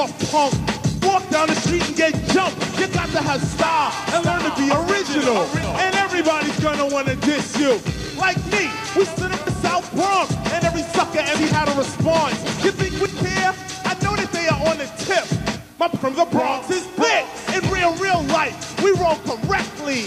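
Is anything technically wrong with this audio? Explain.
Yes. At 1.02, 5.63, 9.47, 11.35, 13.06 and 15.96 s the sound jumps ahead. The likely cause is a dropped buffer (overrun): samples were overwritten before being read. Roughly a tenth to a third of a second vanishes per jump, spliced without silence.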